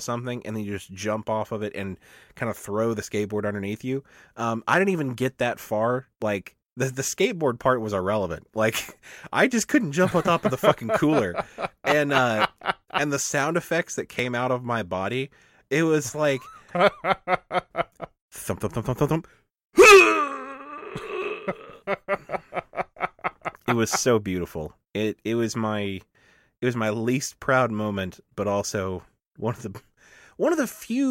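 Audio missing between chunks shows up at 6.22 s, after "even get that far", at 14.19 s, after "the sound effects that", and at 26.15 s, after "it was my". Each is a tiny skip, a very short slice lost and spliced shut. The gaps are spaced in multiples of 4 s, likely chunk boundaries.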